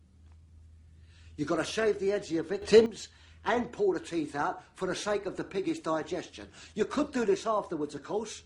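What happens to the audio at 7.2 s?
Nothing goes wrong at 7.2 s; the audio plays through that moment intact, with no dropout, click, glitch or other fault.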